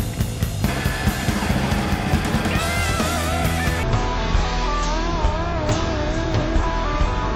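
At 3.83 s the sound drops abruptly and stays that way to the end. This is stereo read as mono. The left and right samples, which alternate in the stream, are being taken one after another as a single channel. Each stereo frame becomes two mono samples, so playback runs at half speed. Everything sounds stretched and sluggish, a full octave lower, down 12 semitones. A faint mirrored copy of the sound also shows up in the upper half of the spectrum.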